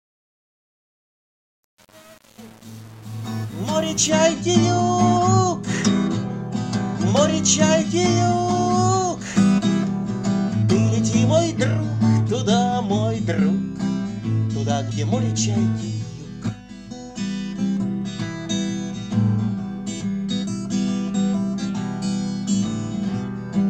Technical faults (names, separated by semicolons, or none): truncation distortion on a fade